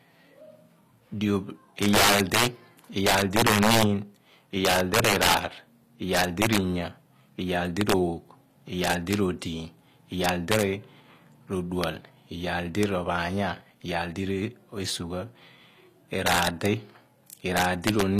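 Violent cracks burst out on the loudest peaks of the speech throughout the clip, far harsher than ordinary clipping. This is integer overflow: with the level driven about 8 dB past the limit, the small fraction of samples that exceed it wrap to the opposite sign instead of being held.

The treble is gritty and metallic for the whole clip, with s sounds turning lispy and the highs bright but unnatural. The likely cause is HE-AAC compression, with the upper band rebuilt from copied lower bands, a plainly audible damage that fits a bitrate around 24 kbps.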